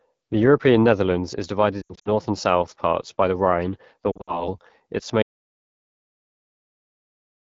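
Speech coded with the AMR wideband (HD Voice) codec at 8.85 kbit/s, one of its lowest rates, so the vocal tract model has too few bits and the whole clip sounds rough and raspy, with a band of synthetic noise above 6.4 kHz. Radio errors caused lost AMR speech frames from 1.81 to 2.09 s, just before "and south parts by": about 160 ms of audio failed, scattered over 240 ms with runs up to 80 ms. The decoder stretched the last good sound with falling gain, giving warbles and brief fades. A second cluster of lost frames from 4.12 to 4.49 s drops about 120 ms over 160 ms, with runs up to 60 ms, and causes the same smeared, fading patches before the voice returns weak. From 5.23 s to the end there is an audio dropout to silence, with no room tone at all, likely because the input was lost while the recorder kept writing silence.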